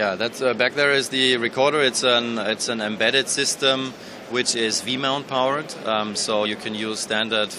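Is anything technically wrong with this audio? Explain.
Yes. From 6.44 to 6.46 s a brief glitch cuts through the sound. This is damaged data in a compressed stream: corrupted bytes there make the decoder misread its frames, lose sync and hunt for the next valid frame header.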